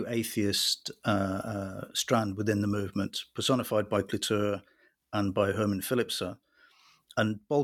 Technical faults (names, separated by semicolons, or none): none